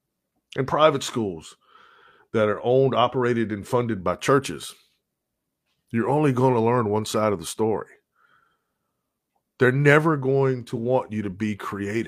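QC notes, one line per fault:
No faults heard.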